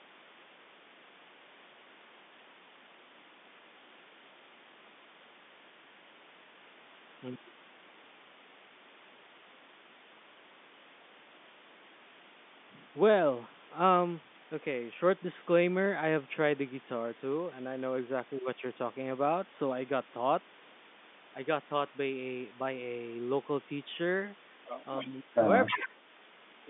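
Telephone speech, band-limited to roughly 200 Hz to 3.6 kHz by G.711 coding, carries an echo leak at 24.98 to 25.05 s and 25.66 to 25.88 s. A copy of the voice returns 304 ms late, about 20 dB and then about 10 dB below the speech, likely from a loudspeaker echo the far-end canceller failed to remove. A spectrogram shows the same harmonic pattern repeated, offset by that delay. Speech is suppressed in double talk from 25.03 to 25.33 s and from 25.68 to 25.89 s. The talker's level drops by about 15 dB and then about 10 dB, likely because the canceller turned down the near voice along with the echo. The waveform envelope visibly sags in those stretches.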